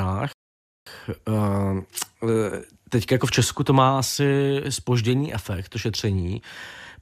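A Bluetooth stall is the likely cause at 0.33 s: interference held up packets, the headphone buffer ran dry, and playback paused until resent data arrived. The speech drops to silence for about 0.54 s, then resumes at 0.87 s.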